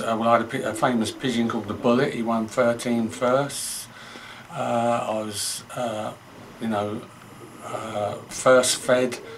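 A chirping warble sits behind the audio from start to finish. It is timecode bleed. Linear timecode from a nearby track or cable has leaked in. Its square wave flips between roughly 1 kHz and 2 kHz, at 25 frames per second. It sits about 30 dB below the sound.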